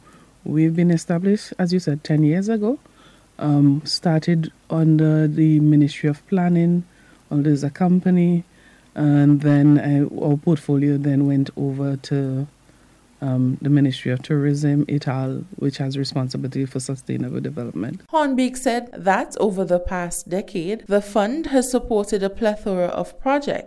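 No technical faults can be heard anywhere in the audio, and the signal holds steady throughout.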